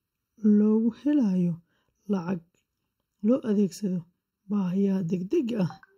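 Speech, with channel delay (comb filtering) throughout. One channel arrives late by about 0.7 ms. Summed to mono, the shared sound cancels in a row of evenly spaced notches, the first around 700 Hz. The voice sounds hollow and phasey.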